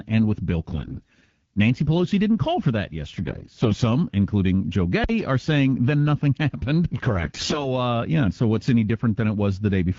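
From 0.67 to 1.33 s and again from 3.20 to 3.77 s, AMR bit errors corrupt the weakly protected frame bits, so the speech keeps its pitch and level but turns hoarse and scratchy. At 5.04 s a phantom power thump occurs: a supply switched on or off on the live input sends a step through the coupling capacitors, giving a deep thump that dies away over about 110 ms. From 7.19 to 7.74 s the bit errors return at roughly twice the earlier rate, making the gargling harsher.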